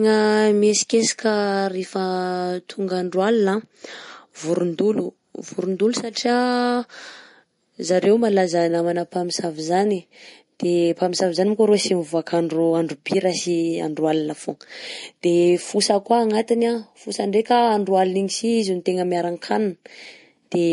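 Speech, likely run through heavy MP3 compression for its whole length, with damage that points to a low bitrate near 40 kbps. Short of bits, the encoder cut everything above 10.6 kHz and let weak frequency lines flicker on and off, leaving a dull, plainly watery sound.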